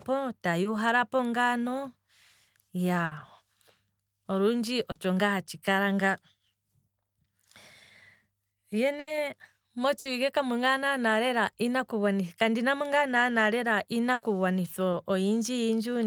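Short concealed packet loss at 0.63 to 0.67 s: about 20 ms of the call arrived too late to decode, so the receiver stretched the preceding sound across the hole and blended back, leaving a brief smear or wobble in the speech. The same happens at 4.91 to 4.97 s (40 ms) and 14.91 to 14.95 s (20 ms).

A burst of packet loss at 3.05 to 3.13 s drops 60 ms in a row. The receiver extends the last sound and fades it, heard as a held buzz or dying hiss, and the speech resumes further on with that stretch gone. Further bursts come at 8.99 to 9.09 s (80 ms), 9.99 to 10.07 s (60 ms) and 14.13 to 14.23 s (80 ms).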